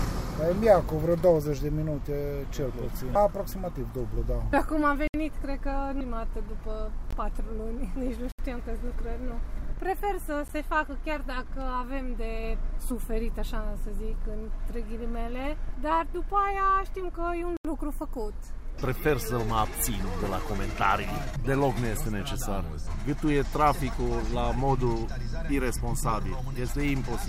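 The audio drops out five times, each a hard cut to dead silence and back: 5.08 to 5.14 s (about 65 ms), 7.11 to 7.13 s (20 ms), 8.32 to 8.39 s (about 67 ms), a single tick at 10.48 s, and 17.57 to 17.65 s (80 ms). Each is a block of digital silence, where samples were replaced by zeros with no fade, most likely because the output buffer wasn't filled in time.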